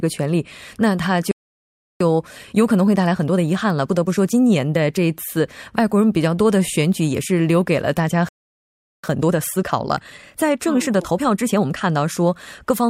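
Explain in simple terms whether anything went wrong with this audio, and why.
A playback stall hits twice, from 1.31 to 2.00 seconds and from 8.29 to 9.04 seconds. Each time the speech simply cuts to silence mid-flow, for about 0.69 seconds and then 0.75 seconds, before picking up again. The likely cause is the player running out of incoming audio, or being briefly held up by something else on the device, so it had nothing to send to the speakers until the data caught up.

Time-compressed catch-up follows each stall, from 2.00 to 5.00 seconds and from 9.04 to 12.04 seconds. Having fallen behind, the player hurries to clear the backlog by snipping out tiny slices of sound and blending the joins. The speech keeps its normal pitch but runs 1.15 times faster after the first gap and 1.25 times faster after the second, sounding rushed.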